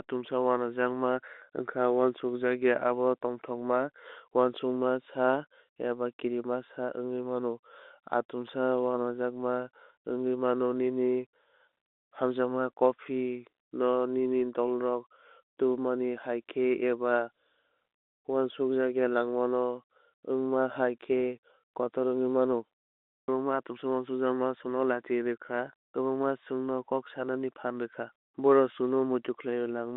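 Nothing stood out on listening to this speech, which carries the narrow band of an ordinary G.711 telephone line, roughly 250 Hz to 3.7 kHz.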